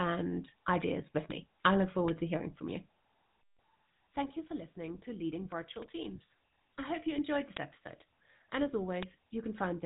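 The whole clip carries the sound of the GSM full-rate codec. The speech has a buzzy, gravelly roughness. The codec rebuilds speech from a coarse pulse excitation. Nothing passes above 3.8 kHz. The damage is plainly audible and fits a 13 kbps stream.

Bit error spikes follow. Each is one flipped bit, a sample value jumping by a power of two and back. Each sounds like a sharp broadband tick. The first falls at 1.31 s, between "ideas with" and "me I look". Others come at 5.82 s and 9.03 s. The one at 7.57 s, after "hope you enjoyed this", spans three samples.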